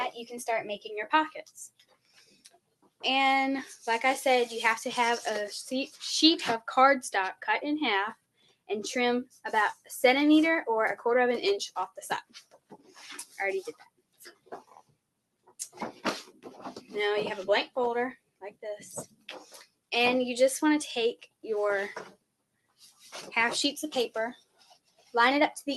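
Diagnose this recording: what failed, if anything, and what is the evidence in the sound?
The failure is in call processing: a speech-tuned noise suppressor was left running on material it wasn't built for. You can hear the level breathing up and down by about 15 dB across the whole clip. Onsets punch through, but anything held or decaying gets read as background and pulled down, so the sound pumps and thins out rather than sitting steady. The codec stage, with its top end rolling off around 12 kHz, isn't the culprit here.

The clearest evidence is where the noise suppressor turned the sound down hardest. The dips run from 1.44 to 3.03 s, 8.15 to 8.7 s, 9.25 to 9.9 s, 12.22 to 16.91 s, 17.68 to 19.92 s, 21.21 to 21.44 s, 22.09 to 23.07 s and 24.36 to 25.14 s. Most bottom out around 19 to 21 dB down, though the 9.25 s one is shallower at about 15 dB. The long stretch from 12.22 s is the worst. 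Sustains and tails sink there while transients survive, which is exactly the gain mask clamping on steady energy.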